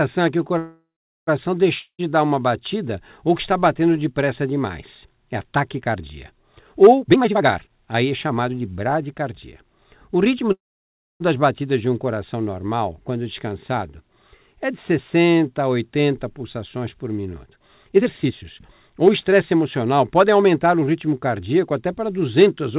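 From 0.58 to 1.29 s the speech stops and the last sound trails off as a fading buzz, then about 0.41 s of silence, before it resumes exactly where it paused. This is a call audio freeze: packets were likely held up and the jitter buffer ran dry, inserting roughly 0.69 s of delay with nothing lost.

At 1.79 to 2.11 s a similar fading buzz and a brief silence precede speech that picks up further along. This is a long network dropout, likely from packets never arriving, so about 0.2 s of audio is simply gone.

From 7.00 to 9.24 s the speech sounds hurried at unchanged pitch, running about 130% speed. This is a jitter buffer speed-up: the receiver trimmed many short pitch-period slices, around 0.7 s in all, to shrink excess buffered delay.

At 10.52 to 11.22 s another call audio freeze occurs, almost entirely silent after a short fade. Delayed packets likely emptied the buffer again, adding about 0.68 s of gap without loss.

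From 17.45 to 20.82 s a second jitter buffer speed-up runs the speech at about 120%, again cutting around 0.7 s. Throughout, the call path passes nothing above 4 kHz, which fits G.711 mu-law at 64 kbps.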